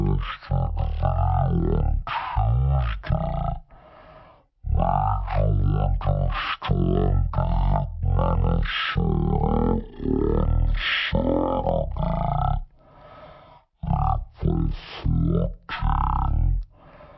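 Speech, but the whole clip is a wrong sample rate case: it plays at about 0.36 times normal speed and roughly 17.6 semitones low, so everything drags and sounds deep. That ratio fits 44.1 kHz audio being played out at 16 kHz with no conversion.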